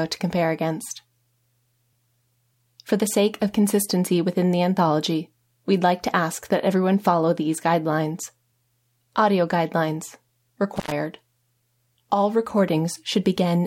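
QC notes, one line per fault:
10.76 to 10.92 s, intermittent contact. The sound drops out for about 84 ms, with crackle at the edges of the gap. A loose cable or plug briefly opens the signal path, then reconnects, cutting the audio and making those edge clicks.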